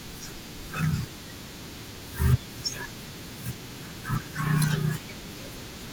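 At 1.12 s, 3.54 s and 4.76 s the speech jumps forward, with no gap, as if a sliver of sound were snipped out and the edges butted together. Each is likely a dropped buffer (overrun): the recording software fell behind, the hardware overwrote a block of roughly 20 ms before it was read, and the samples on either side were joined directly.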